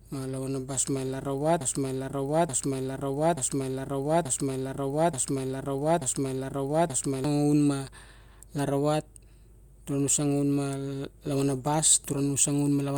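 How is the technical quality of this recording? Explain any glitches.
The recording has one serious glitch, a broken-record loop. From 1.61 s to 7.24 s, a 0.88 s fragment of speech repeats six times back to back, likely because the player or stream stalled and kept resending its last buffer. The speech that belonged in that stretch is lost. On a spectrogram or waveform, the stretch shows as identical blocks repeating every 0.88 s.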